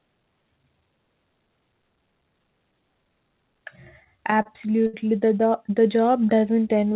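Repeated stalls (stutter), 4.04 to 4.95 s: packets arrived late, so the receiver stretched the last sound over seven gaps totalling 149 ms, the longest 68 ms. The speech drags and stutters but loses nothing. Jitter buffer slow-down, 5.84 to 6.41 s: repeated pitch periods add 70 ms to rebuild the buffer's reserve, so the speech runs at 89% speed at unchanged pitch, with audio band-limited to 4 kHz by the G.711 A-law call codec.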